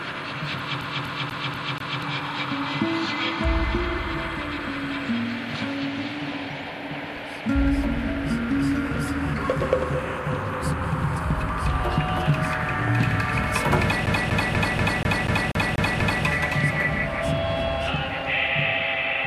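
From 0.81 to 2.02 s the CD gets stuck on one turn: a scratch keeps knocking the laser back a track, so the same 0.24 s chunk repeats five times with a tiny mute at each jump. It happens again from 14.06 to 16.24 s, nine repeats this time.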